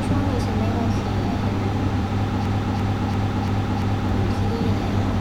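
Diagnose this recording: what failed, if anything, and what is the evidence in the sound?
Broken-record loop from 2.46 to 4.09 s. A 0.34 s fragment repeats five times, replacing the speech. Likely cause: a stalled playback buffer.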